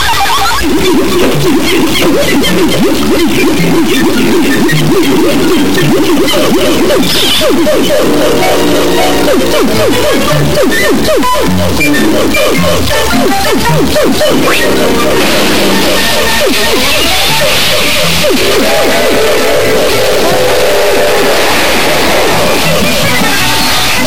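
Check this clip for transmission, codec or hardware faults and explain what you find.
One fault is present, lasting the whole clip: a stuck bit. The audio carries a harsh, buzzy distortion throughout, and the quieter stretches fill with loud noise instead of falling silent. This is likely a single data bit held fixed by a broken line or converter. About half the samples are pushed off by that bit's weight, a large step of roughly -5 dBFS, which points to a high-order bit and explains why the noise is so prominent. Because the bit also flips with the sign of small values, the pauses carry noise rather than silence.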